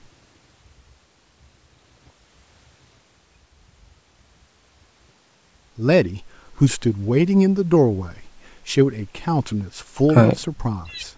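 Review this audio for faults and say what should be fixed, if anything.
Nothing here needs fixing. The speech has passed through a call's microphone processing, which trims the deepest bass and leaves nothing above 8 kHz, as expected for that path.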